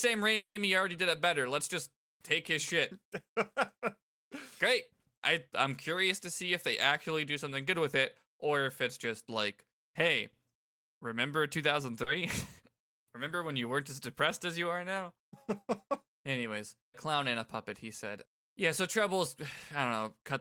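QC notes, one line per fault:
0.35–0.58 s, call audio freeze: The sound halts just before "already did it better." A brief buzzy continuation fades into about 120 ms of silence. This is likely a jitter buffer running empty while packets were held up. About 200 ms is added, nothing is lost, and the speech resumes late.
12.03–12.09 s, short stall from a late packet: One sound is held slightly too long, with a faint buzz or dip. A packet arrived late, so the receiver stretched the last sound by about 30 ms. Speech then continues from the same point, with nothing missing.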